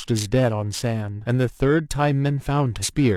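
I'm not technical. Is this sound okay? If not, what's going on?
No. Throughout the speech there is periodic clock jitter: the device's timing clock is being shaken at around 2 kHz, adding ghost tones beside every sound. It gives the voice a rough, metallic edge, clearest on higher sounds, and unlike background hiss it disappears completely in the pauses.

There are also two places where compressed frames were skipped, at 1.21 to 1.26 s and 2.79 to 2.85 s. Chunks of audio never got played, so the speech jumps forward by about half a second at the first spot and a little less at the second. At each spot the audio lurches ahead.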